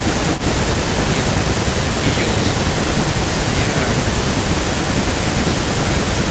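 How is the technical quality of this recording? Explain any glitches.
The recording has a recurring echo leak running through nearly all of it, with only short breaks around 2.2 to 2.4 s and 3.7 to 3.9 s. The spans are 0.05 to 2.16 s, 2.37 to 3.68 s, and 3.94 s to the end. A delayed copy of the speech trails the original by about 383 ms, sitting roughly 10 dB down. The likely cause is the far end playing the call on a loudspeaker, with its echo canceller not fully removing that pickup before sending it back. The audio tops out around 8 kHz, which fits the call path.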